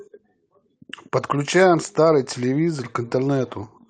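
No technical faults can be heard anywhere in the recorded speech, and the signal holds steady throughout.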